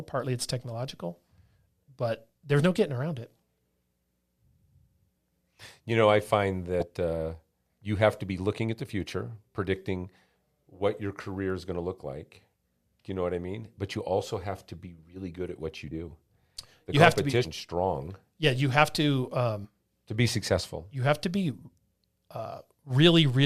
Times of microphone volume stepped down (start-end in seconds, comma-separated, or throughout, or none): none